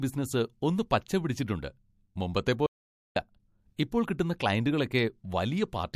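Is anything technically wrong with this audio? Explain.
Yes, there are two faults in this speech clip.

From 2.66 to 3.16 s there is an audio dropout to silence: about half a second of the speech disappears into silence, likely because the input link failed while recording continued. Unlike a noise gate closing, no room tone survives, and the speech resumes abruptly mid-flow.

At 3.77 s a sharp attack shows pre-echo. A hiss about 16 dB louder than the surrounding quiet arrives roughly 13 ms ahead of the onset, smearing it. The codec spread its quantisation noise across a block rather than adapting, which fits a 36 ms transform window with no switch to short blocks. Because the noise arrives before the attack rather than trailing after it, it is distinct from reverberant ringing.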